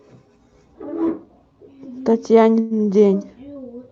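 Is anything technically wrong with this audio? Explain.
Yes. From about 2.60 to 2.74 s there is a call audio freeze. Packets were likely held up in transit, leaving the jitter buffer empty, so the receiver kept extending the last sound for about 107 ms as a fading buzz or hiss rather than dropping to silence. When the packets arrived, playback resumed where it had stopped, so nothing is lost. The audio simply stalls, then carries on about 107 ms later. Across the clip the call codec limits the sound to about 8 kHz.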